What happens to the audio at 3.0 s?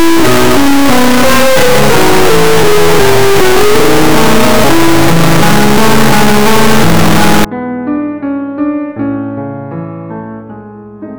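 Integer read as float: from 0 to 7.45 s, 32-bit integer music samples are misread as floats, so the output slams between silence and clipping as a harsh, extremely loud buzzing square wave.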